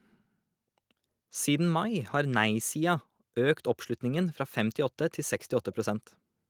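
No technical faults can be heard in the speech.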